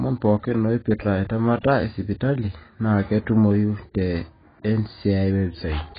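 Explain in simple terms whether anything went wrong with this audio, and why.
AAC compression throughout the speech: heavy data squeezing has likely removed everything above 4.8 kHz, leaving the sound dull and smeared where fine detail was discarded.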